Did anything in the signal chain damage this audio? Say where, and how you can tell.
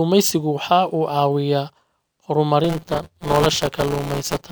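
Yes, at the driver/buffer stage: buffer tearing from 2.64 s to the end. There's a steady robotic buzz at 172 Hz, which fits a 256-sample buffer. Writer and reader slipped, so each period replays audio from about 10 ms earlier, hard-joined on both sides.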